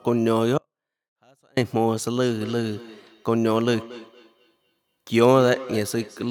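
From 0.58 to 1.57 s the speech cuts out abruptly for about a second, leaving only a faint sound roughly 40 dB below the voice. This is an audio dropout to a faint residue, likely the wanted signal being lost while the path behind it stayed live.

From 2.16 s onward each word returns as a thin, ringing repeat about every fifth of a second, at most about 17 dB under the speech. This feedback echo between two devices arises when one device replays another's microphone and that microphone captures it again.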